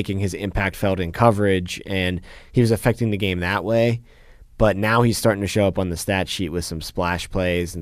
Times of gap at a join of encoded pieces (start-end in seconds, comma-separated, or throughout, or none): none